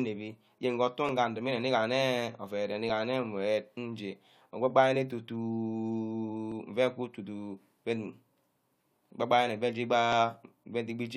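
From 1.09 s to 10.12 s a regular click recurs every 1.81 s, about seven times. These are clock drift buffer slips, likely from two devices whose clocks differ by a few hundred ppm, so a few dozen samples are dropped or repeated at each slip.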